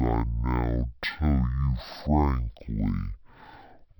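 From start to finish the speech shows a stereo read as mono fault. The interleaved left and right samples were taken in sequence as one channel, so every stereo frame became two consecutive mono samples. Played back at the intended rate, the audio runs at 0.5x speed and sits 12 semitones, a full octave, too low, giving a slow, dragged, deepened delivery. A fainter mirrored copy of the sound also appears in the upper half of the spectrum.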